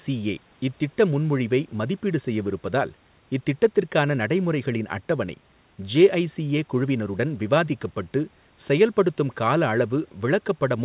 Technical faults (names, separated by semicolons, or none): none